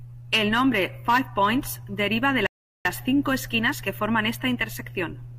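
At 2.47 s the speech stops dead and falls silent. The silence lasts until 2.85 s, about 0.39 s in all. This is a rebuffering stall. The player used up its downloaded audio and had to wait for more data before it could continue. When playback returns, it picks up at exactly the point where it broke off. No speech is skipped. The clip simply gains that gap of dead air.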